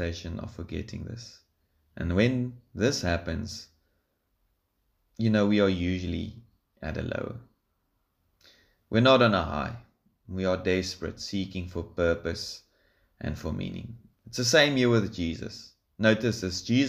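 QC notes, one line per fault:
No fault found in the speech.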